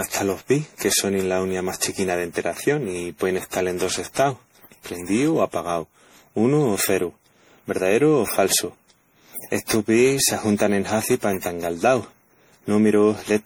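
Speech throughout shows generation loss: swirly, hollow, smeared attacks beyond what one 64 kbit/s MP3 pass would give, likely from about ten repeated MP3 re-encodes.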